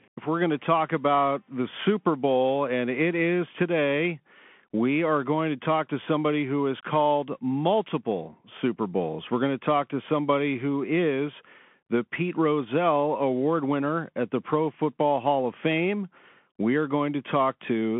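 Throughout the speech, the Bluetooth CVSD headset codec confines the sound to a 200 Hz–3.4 kHz line band with nothing above 3.8 kHz, which fits a 64 kbps CVSD link. Its adaptive one-bit steps lag on loud bright sounds, so sibilants turn gritty over a grainy hiss.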